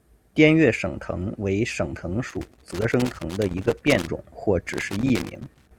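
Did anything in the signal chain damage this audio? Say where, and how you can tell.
Yes. Two stages left marks on this speech. In the analogue wiring there's loose connector crackle: right after "藤为省藤" a ragged burst of scratching runs from 2.29 to 4.07 s, ending just before "种或", then comes back at 4.73 s and carries on to the end of the clip. That's a worn or dirty contact making and breaking as it shifts, chopping the signal on and off in an irregular pattern.

Separately, the codec side shows damaged data in a compressed stream. There's a short glitch at 2.90 s, buried inside the first crackle burst, and another at 5.35 s. Those are the decoder hitting corrupted bytes in a frame, misreading or discarding it, then losing sync and hunting for the next valid frame header, so you get a brief glitch rather than the scratchy texture of the connector.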